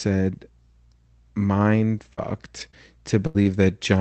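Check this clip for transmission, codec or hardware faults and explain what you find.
Repeated packet loss (robotic sound) affects the speech from 1.97 s to 3.82 s. Four gaps fall in this stretch, about 160 ms missing in total, the longest 78 ms. Each hole is filled by extending the preceding sound, roughly 150 ms rebuilt. The result is choppy, robotic speech with pieces dropped. The call path's band limit near 8 kHz sits underneath.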